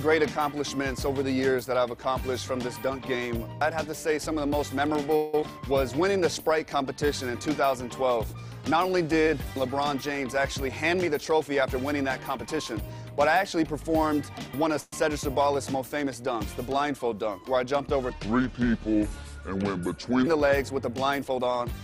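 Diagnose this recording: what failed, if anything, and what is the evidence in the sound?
Call audio freeze (network/jitter buffer): at 5.16 to 5.34 s (170 ms) and 14.80 to 14.93 s (120 ms), the last sound stretches into a fading buzz, then resumes intact. Likely cause: delayed packets emptying the buffer.

Skip ahead (network/jitter buffer): at 5.41 s the audio jumps forward with almost no gap, dropping about a tenth of a second as the buffer shed excess delay.

Jitter buffer slow-down: from 6.00 to 7.07 s playback runs at 91% speed with unchanged pitch. Repeated pitch periods added 100 ms to rebuild the buffer reserve.

Jitter buffer speed-up: from 10.68 to 13.11 s the audio runs at 106% speed, same pitch, sounding hurried. About 150 ms of short pitch-period pieces were removed to cut the delay.

Section at the wrong speed (playback): from 18.10 to 20.27 s speed drops to 0.729 times normal and pitch falls about five semitones. 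It likely comes from resampling against the wrong clock.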